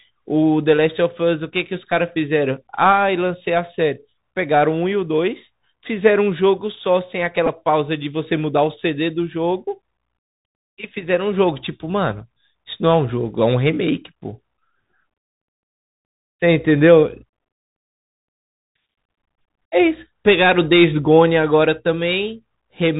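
Throughout the speech the Bluetooth CVSD headset codec is plainly audible. Its one-bit delta coding, which fits a 64 kbit/s stream, cuts everything above 4 kHz, so a spectrogram shows a hard ceiling there. Step-size lag makes s sounds scratchy and leaves a granular hiss under the speech.

At 7.46 s a Bluetooth headset packet is repeated. About 11.2 ms went missing, which fits three lost packets, and the last good packet was replayed. The result is a brief buzz near 267 Hz. The waveform shows identical 3.75 ms segments, and the spectrogram shows evenly spaced harmonic lines.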